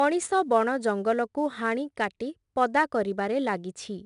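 Throughout the speech, 4-bit ADPCM compression leaves a gritty hiss that rises and falls with loudness, unlike steady background noise. Nothing sounds above 10.6 kHz, which points to roughly 89 kbps.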